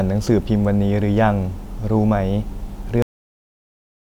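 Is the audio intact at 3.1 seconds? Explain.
No. At 3.1 seconds the clip is already silent. A cut-off end begins at 3.02 s and lasts to the end. The final buffers were never written, so the speech stops mid-sound. It falls straight to digital silence with no natural decay.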